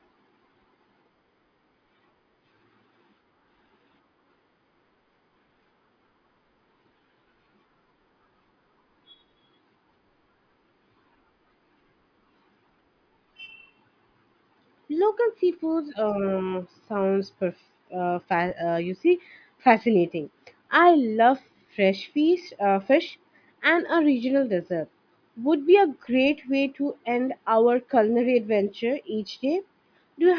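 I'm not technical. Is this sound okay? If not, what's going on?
Yes, no audible faults.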